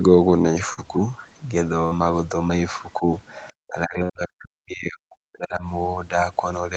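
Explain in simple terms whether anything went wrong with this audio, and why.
A few things went wrong. At 0.73 to 0.79 s, short concealed packet loss: about 40 ms of sound arrived too late, and the receiver papered over it, leaving a brief smear.

At 1.85 to 1.93 s and again at 4.03 to 4.11 s, a burst of packet loss: about 60 ms went missing each time, heard as a held buzz or fading hiss before the sound jumps ahead.

Around 3.48 to 3.53 s, a very faint scrap of the other side's voice leaking through, likely because the echo canceller didn't fully remove the loudspeaker sound picked up by the microphone.

From 3.66 to 5.63 s, roughly two seconds, the talker's speech is suppressed in double talk. Both sides were most likely talking at once, so the echo canceller turned everything down, at times almost to silence.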